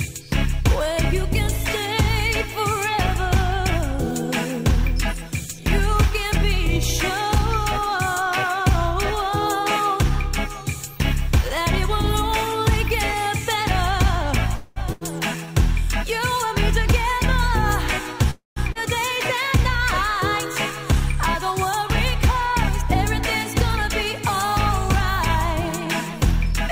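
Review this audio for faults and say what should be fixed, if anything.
Two call audio freezes occur, at 14.55 to 14.79 s and 18.31 to 18.59 s. In each, the last sound is stretched into a fading buzz or hiss, and nothing is lost. The first gap is about 210 ms long. The second lasts about 260 ms, and 160 ms of it falls silent. The cause is likely packets held up in transit, which left the jitter buffer empty. Playback resumes where it stopped, so it now runs later. A jitter buffer that adapts sooner to rising network delay would prevent this.

A burst of packet loss follows at 14.92 to 15.04 s. About 80 ms of audio is gone. The receiver fills the gap by holding the last sound and fading it, for about 84 ms. The audio then picks up further along, and the part in between is missing. Forward error correction or packet redundancy would let the receiver rebuild short runs like this.

A skip ahead occurs at 18.72 to 18.78 s, just after the second freeze. 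Roughly a third of a second of audio is dropped, either on the way or by an overflowing jitter buffer. The two sides of the jump meet with only a brief 28 ms fill between them. Letting the buffer drain gradually through time-stretching, rather than discarding whole stretches, would prevent the audible jump.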